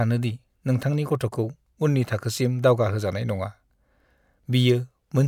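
Nothing technical goes wrong anywhere in this speech recording, so there's no fault to point to or explain.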